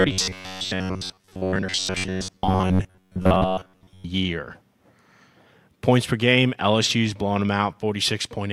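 From 0.01 to 4.05 s the speech becomes robotic sound, a fixed 93.8 Hz metallic buzz, likely from repeating 11 ms buffers, unlike codec warble's wandering pitch.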